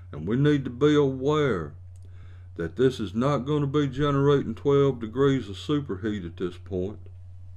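A brief stutter at 2.23 to 2.29 s, where about 50 ms of audio plays twice in quick succession, points to overlapping chunks: the audio was handled in blocks of around 2.5 s, and the next block began before the previous one ended.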